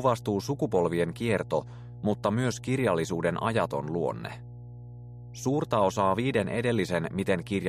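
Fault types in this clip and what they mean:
Mains hum: a steady low tone at 60 Hz runs under the sound for the whole clip, fairly prominent at roughly 15 dB below the signal. Power-line current is leaking into the signal path, through a ground loop or a nearby transformer. Unlike wind or handling rumble, which is broadband and comes and goes, this stays at one fixed pitch and level throughout, and its 60 Hz tone points to a 60 Hz mains supply rather than a 50 Hz one.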